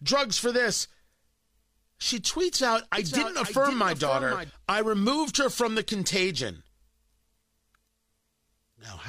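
From 2.98 s, just after "tweets out", to 4.50 s, before "I removed her from", the speech carries a doubled audio track: a second, full-band copy trails the original by about half a second, roughly 10 dB lower. It has no reverberant tail or room colour and cuts in and out abruptly at those edges. The likely cause is the same signal reaching the mix twice, once through a slower capture path or an edit leaving two offset copies.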